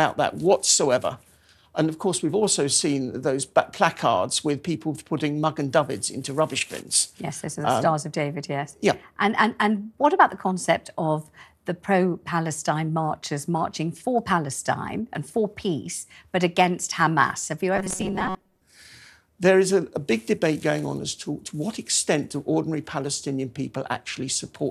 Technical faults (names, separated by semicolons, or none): robotic sound from repeated short buffers